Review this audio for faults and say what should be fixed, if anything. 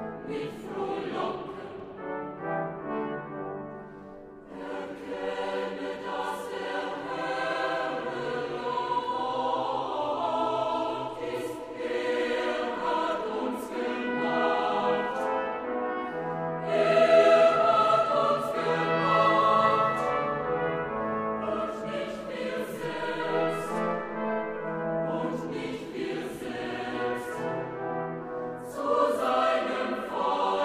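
Nothing in this recording calls for a fix, as no technical fault can be heard anywhere in it. No repair or change to the capture chain is needed.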